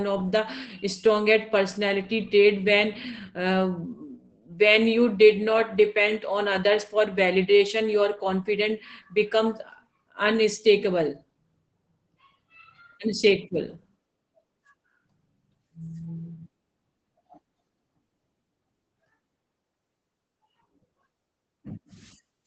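From start to finish, the speech carries Opus voice compression damage, and it is plainly audible. Nothing is present above 8.7 kHz, so the top of the sound is gone and the voice is muffled. The coder works in SILK mode at wideband, predicting the voice and coding its excitation coarsely. That coarse coding leaves a hoarse, slightly robotic edge, which fits a bitrate around 12 kbps.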